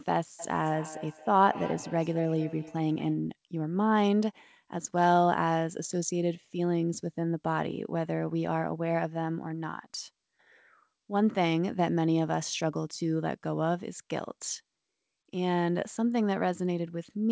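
From 0.39 to 3.24 s there is feedback echo between two devices: a second device in the same room plays back what the first microphone sent, that microphone picks it up again, and neither echo canceller removes the other device's output. The speech returns about every fifth of a second, with each repeat thinner and more ringing than the last. The loudest repeat sits about 14 dB below the direct speech, over a call path that stops at 8 kHz, which fits G.722.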